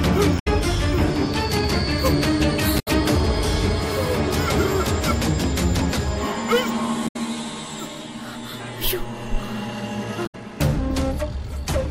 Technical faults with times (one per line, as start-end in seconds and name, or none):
0.35-0.48 damaged data in a compressed stream
2.76-2.88 damaged data in a compressed stream
7.04-7.16 damaged data in a compressed stream
10.23-10.35 damaged data in a compressed stream